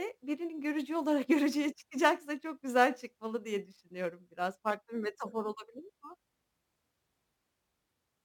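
From start to finish the speech carries a crude rate conversion. Samples appear to have been repeated at a nearest-neighbour step rather than filtered, which fits a change from 44.1 kHz to 48 kHz. The periodic repetition error sits roughly 30 dB below the voice and sounds like a gritty, inharmonic fizz riding on louder and brighter syllables. A spectrogram would show faint mirrored partials unrelated to the speech harmonics, and the waveform has tiny stair-step flats.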